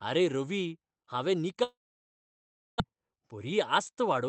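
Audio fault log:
1.63 to 2.82 s, long network dropout: just after "आरे रवी हांवें" the audio stops arriving, and the receiver stretches the last sound into a fading buzz before leaving about a second of near silence. The lost stretch is not replayed; the speech resumes further on with roughly 0.68 s of it gone. The gap is likely caused by packets failing to reach the receiver for over a second, with the delay jumping by around half a second.
2.89 to 4.25 s, jitter buffer speed-up: after the dropout the buffer holds more audio than it wants, so the receiver trims short pitch-period slices again and again to catch up. The speech runs about 8 percent fast at unchanged pitch, sounding slightly hurried, with roughly a tenth of a second removed in total. The call path's Opus coding, which fits a band limited to about 8 kHz, carries this.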